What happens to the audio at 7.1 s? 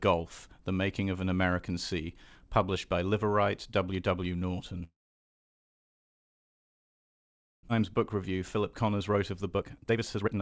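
At 7.1 s the audio is silent, in the middle of a gap from 4.84 to 7.71 s. This sounds like a long network dropout, likely from packets failing to arrive. A brief fading fill gives way to silence. At 7.71 s the sound resumes with about 1.6 s missing.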